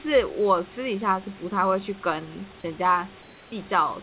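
From 3.22 to 3.52 s, likely comfort noise in place of the background: a smooth hiss about 2 dB quieter, smooth and texture-free on a spectrogram.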